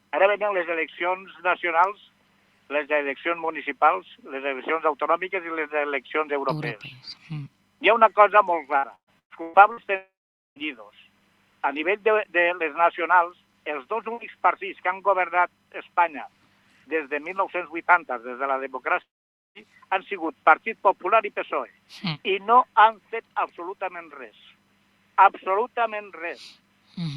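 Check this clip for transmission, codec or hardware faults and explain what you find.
Transmission faults are present, of two kinds.

From 8.77 to 9.86 s there is repeated packet loss, heard as robotic sound. Five short gaps hit the audio, the longest about 118 ms. Each is patched by stretching the previous sound, so nearly half this span is filled-in material. It sounds choppy.

At 9.96 to 10.59 s and again at 19.02 to 19.58 s, the audio stops for about 0.6 s and 0.54 s. A brief continued buzz fades into near silence, then sound resumes with that part missing. A long network dropout is the likely cause.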